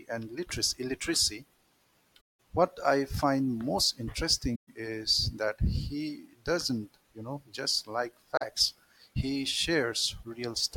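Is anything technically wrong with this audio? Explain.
Yes. There's AAC frame loss with muting at 2.21 s (before "what I find most"), 4.55 s (after "what I find most") and 8.37 s (after "you know just like"). The decoder zeroed the missing frames, so the overlapping windows fade the sound out and back in, leaving soft-edged holes.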